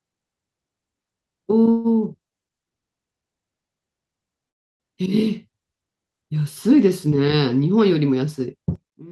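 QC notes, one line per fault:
1.71–1.87 s and 4.48–4.83 s, call audio freeze: Packets were likely held up in transit, so the jitter buffer ran dry and the receiver had to fill the wait. At 1.71 s it extends the last sound for about 130 ms as a brief fading buzz or hiss. At 4.48 s the wait lasts about 315 ms, and almost all of it is silence. Both times the speech resumes where it stopped, so nothing is lost, only delayed.
2.28–2.35 s and 2.69–2.74 s, short stall from a late packet: Each time, a single packet arrived after it was due and the jitter buffer briefly emptied. The receiver held the last sound for about 30 ms and then about 24 ms, until the packet came. The speech then continues from the same point, leaving a slightly stretched sound with a slight buzz or dip instead of a gap.
8.76–9.11 s, one channel inverted: One stereo channel has likely flipped polarity, so on a mono sum the shared centre content cancels. 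The level drops by about 18 dB through the final stretch of the clip. Only the small difference between the channels survives, a faint trace of the speech.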